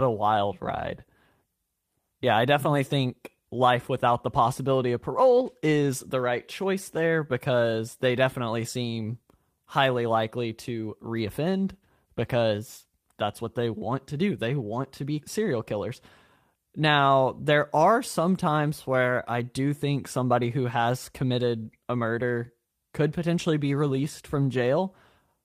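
No technical faults are audible.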